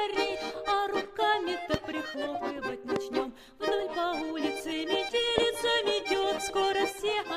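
A loud pop strikes at 1.74 to 1.76 s, 2.96 to 2.98 s and 5.38 to 5.40 s. Each is one sharp hit, roughly 20 dB above the sound, which continues underneath. A brief voltage spike, likely from a switch or static, caused them.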